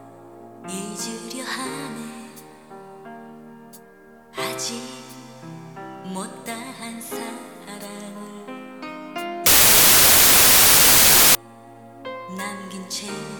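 From 9.46 to 11.35 s, a wrong sample width fault appears. The sound suggests 32-bit integer samples were read back as packed 24-bit ones, so frame boundaries drift and most values are stitched from mismatched bytes. That stretches the passage to about 0.75 times normal speed, dropping its pitch, while loud, harsh noise swamps it, leaving the original faint underneath until normal playback resumes at 11.35 s.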